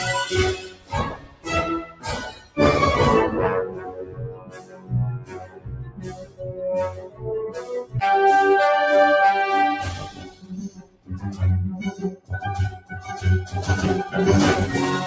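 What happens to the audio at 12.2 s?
Sound cut by the noise suppressor, from 12.16 to 12.31 s: the suppressor mistakes this stretch for noise and pulls it down by about 15 dB, so it briefly sinks and thins. This happens because a noise suppressor made for speech was left on the audio, and it keeps turning steady and fading sound down, making levels swing by roughly 15 dB.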